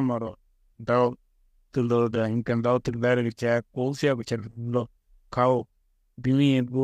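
No technical faults can be heard anywhere in the recording.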